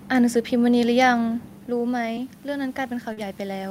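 From 1.68 s to the end, automatic gain rising: after the talker moves back around 1.5 s and the input falls about 9 dB, the gain control slowly lifts speech and room noise together. At 2.15 s a short concealed packet loss briefly extends the preceding sound, and at 3.13 s it smears about 40 ms. Each gap ends with a lost packet rebuilt from error correction, 2.17 to 2.19 s and 3.17 to 3.19 s, where 20 ms of lower-bitrate copy sounds rougher and noisier.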